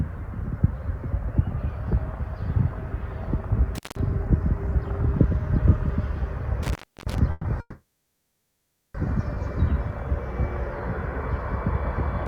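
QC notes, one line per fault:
3.75–3.99, 6.63–7.18 and 12.26: intermittent contact. A loose connection opens for about 180 ms and 320 ms, and opens again just as the clip ends. Each break cuts the sound, leaving crackle at its edges.
7.31–7.46 and 7.60–8.96: call audio freeze, likely from packets held up in transit that emptied the jitter buffer. The last sound is extended for 130 ms, then for 1.34 s, of which 1.14 s is silence. Playback resumes where it stopped, with nothing lost.
9.34–9.38: short stall from a late packet. A packet missed its playout time, so the receiver stretched the preceding sound by 20 ms and then continued from the same place.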